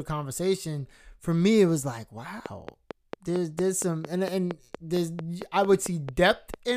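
From 2.46 s to 6.55 s, just after "me it was like", a train of clicks runs under the speech. About twenty near-identical pulses arrive at a regular 4.41 per second, each peaking roughly 10 dB above the signal, so they read as steady ticking that carries through the pauses as well. The even spacing and fixed shape point to a periodic injection, likely interference from nearby equipment or a faulty connection or power supply.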